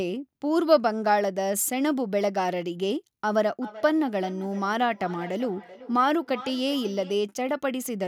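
From 3.61 s to 7.23 s the speech picks up a feedback echo between two devices: a second device in the room replays the call, its output leaks into the microphone, and the local echo canceller leaves it alone because it only removes its own playback. Each stretch of speech returns roughly 0.4 s later, at about 16 dB below the direct sound. That fixed, distinct repeat interval sets it apart from room reverberation, which smears smoothly rather than coming back as discrete copies.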